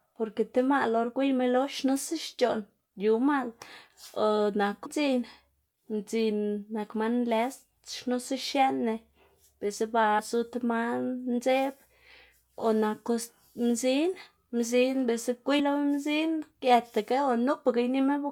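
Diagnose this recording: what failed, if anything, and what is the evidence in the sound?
Compressed frames were skipped at the codec or decoding stage. At 4.85 s, 10.18 s (between "biꞌltsa ba" and "zu tib") and 15.59 s (between "naku mzin mzin biꞌltsa" and "lo mzin"), the sound jumps ahead by about 0.2 s, 0.15 s and 0.2 s respectively. Each jump spans several 26.1 ms frames, and each join is a jump ahead, not the silent gap of a buffer dropout.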